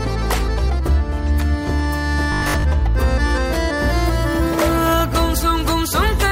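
From 2.32 to 2.64 s the sound turns into a rigid, metallic buzz at 50 Hz that follows the original only loosely, the robotic sound from repeated short buffers. The likely cause is audio arriving too seldom, so the playback side filled the gaps by looping the most recent 20 ms chunk, one over the 50 Hz rate, while the real material in between was skipped. For most of that stretch, the heard audio is repeats rather than new sound.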